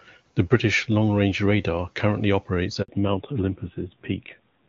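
Speech, with a handover gap from 2.82 to 2.88 s, right after "range radar currently operates": the sound cuts to 60 ms of clean silence while the call switches networks. Unlike packet-loss concealment, nothing fills the hole with smeared or repeated sound. It simply stops and restarts on the new link. From 2.88 s to the end comes a fallback to narrowband. The clear wideband sound heard earlier, consistent with HD Voice at a high rate, gives way to audio with nothing above 4 kHz, duller and rougher, as a low-rate narrowband codec would give. What separates this from a plain low-pass filter is the timing: it switches on abruptly at the handover and adds coding roughness along with the lost top end.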